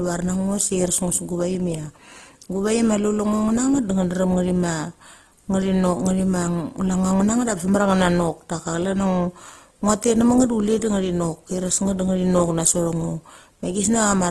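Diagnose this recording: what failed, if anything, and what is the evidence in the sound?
The fault is at the codec stage and runs through the whole speech clip. The sound is rough and grainy throughout, with nothing above 12.4 kHz. This is likely Opus compression in CELT mode, fitting a rate around 16 kbps. Starved bands get filled with noise instead of dropping out.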